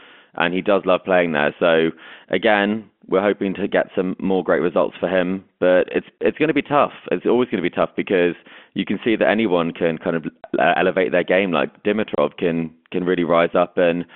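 At 6.19 to 6.21 s, around 10.43 s, and at 12.15 to 12.18 s the speech drops out completely. This is packet loss filled with silence: a 30 ms gap each time, which points to a single lost packet, with the receiver inserting silence instead of concealing it. Each hole ends abruptly. A waveform shows a flat line between cut-off edges, and a spectrogram shows a blank vertical slot with a thin broadband stripe at each edge, inside the narrow telephone band of the G.711 line.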